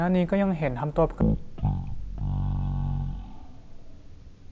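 From 1.21 s to the end, the speech plays back at the wrong sample rate. It runs at one third of its proper speed and drops about 19 semitones, which fits 48 kHz material being played at 16 kHz without conversion. Voices sound deep, slow and dragging. On a spectrogram, harmonics and formants sit at a third of their usual height and every syllable is stretched threefold in time. The waveform shows drawn-out, widely spaced cycles.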